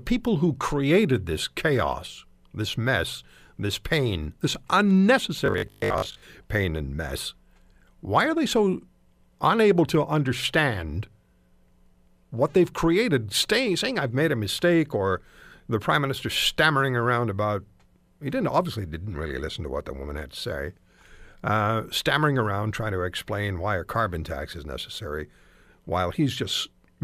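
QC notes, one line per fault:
5.46 to 6.22 s, robotic sound from repeated short buffers: the speech collapses into a stiff, metallic 50 Hz buzz that still loosely tracks the words. Likely the audio arrived too slowly, so a 20 ms slice got looped while most of the real signal was dropped.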